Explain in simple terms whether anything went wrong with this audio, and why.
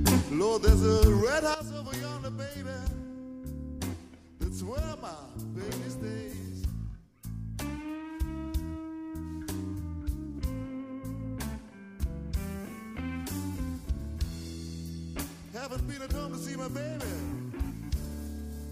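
Yes, something went wrong. At 1.54 s there is a sudden gain jump: the whole sound, background noise included, drops abruptly to a much quieter level and stays there to the end. The likely cause is a volume setting applied instantly instead of being faded in.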